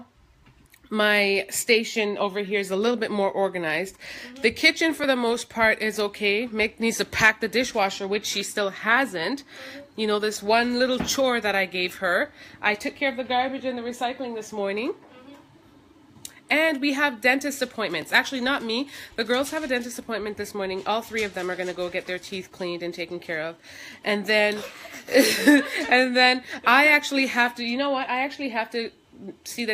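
At 5.04 s and again at 18.02 s, a block of digital silence about 2.7 ms long replaces the sound, which fits a 128-sample buffer left unfilled in time or filled with invalid values. It cuts out and back abruptly, too short to register as silence, so each is heard as a tick or dip.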